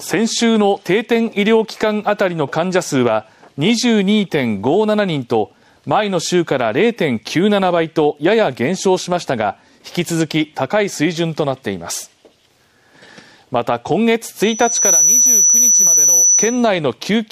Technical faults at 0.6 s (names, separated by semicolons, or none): none